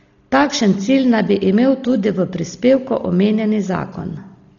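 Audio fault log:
Throughout: Dolby Digital compression, likely from a very low bitrate around 32 kbps. Heavy damage leaves the speech dull with rough, fluttering noise around tones, as starved frequency lines get noise fill. A spectrogram shows nothing above 6.9 kHz and blotchy, speckled harmonics.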